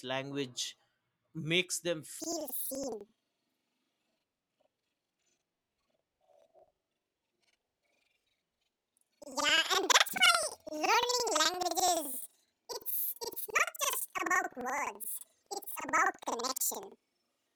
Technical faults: planar audio read as interleaved

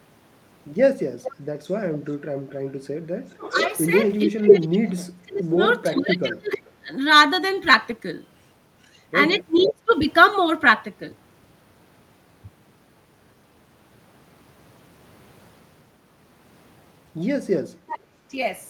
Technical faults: echo leak; speech suppressed in double talk

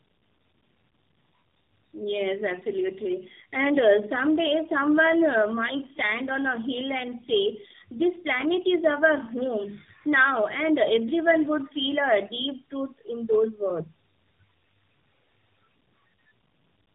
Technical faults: tandem speech coding

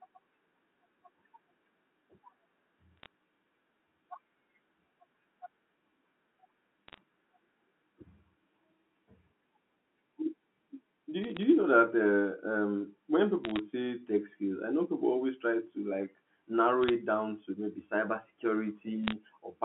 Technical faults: bit errors on a digital phone line

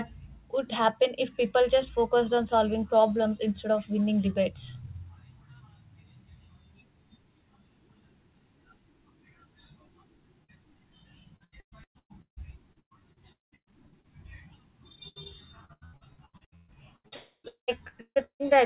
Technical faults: short concealed packet loss; repeated packet loss (robotic sound); burst of packet loss; long network dropout

